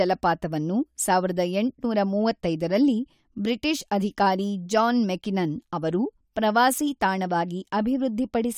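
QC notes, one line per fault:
No faults found in this speech clip. Nothing here calls for a QC entry.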